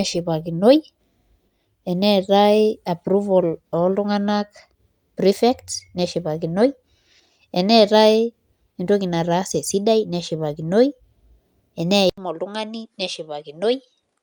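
A speech clip. At 12.1 s the sound cuts out for 80 ms, then returns duller, somewhat quieter, with nothing above 11.4 kHz and faint new background noise. This is likely an input switched to a poorer device.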